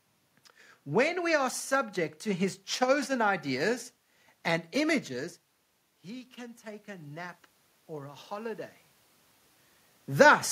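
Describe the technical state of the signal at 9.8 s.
At 9.8 s the signal is intact, with only the room's own background noise and a natural change in the talker's distance from the microphone.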